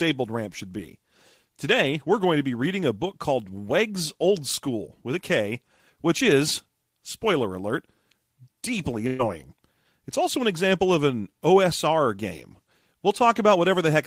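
At 9.07 s a burst of packet loss strikes: a run of packets failed to arrive in time, so the receiver extended the last sound for 116 ms, turning it down as the gap went on. At 9.22 s the speech resumes, with 120 ms skipped.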